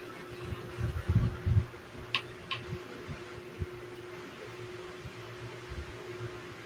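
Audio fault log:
throughout echo with no canceller: every stretch of speech is shadowed roughly 0.4 s later by a thin copy about 15 dB quieter, from an uncancelled far-end loudspeaker.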